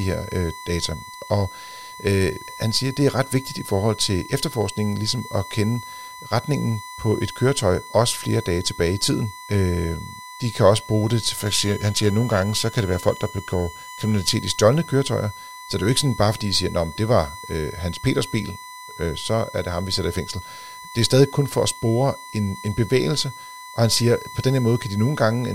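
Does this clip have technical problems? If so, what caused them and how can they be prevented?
Yes. A USB whine at a steady 1 kHz sits roughly 15 dB below the speech for the whole clip. Current drawn in 1 ms bus frames leaks through power or ground. Unlike mains hum, the pitch is 1 kHz, not 50 or 60 Hz. Prevent it with a powered hub, a ground-loop isolator or a separately powered interface.

From 11.37 to 14.35 s, periodic clock jitter adds a rough, metallic edge. Interference near 1 kHz wobbles the converter clock, putting sidebands at that spacing around every component. Unlike the whine, it is not a tone of its own and disappears in silence. Prevent it with a cleaner, well-isolated clock supply.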